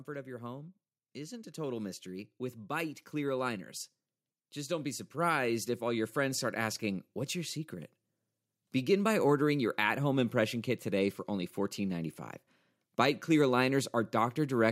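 From 0.06 to 3.74 s the level climbs by about 7 dB, and from 4.65 to 7.99 s it climbs again by about 6 dB: automatic gain rising both times, as the gain control judges the input too quiet and lifts its gain over several seconds. The background swells in step with the speech, which separates this from a talker moving closer, where the voice would grow against a steady room sound.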